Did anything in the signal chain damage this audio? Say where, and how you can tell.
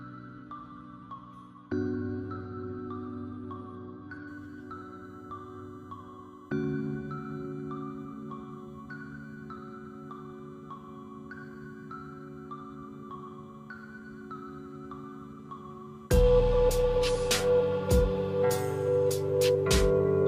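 Yes. USB whine is leaking in through the power or ground wiring. From 4.28 s onward, the bus's 1 ms frames produce a steady 1 kHz tone about 45 dB down.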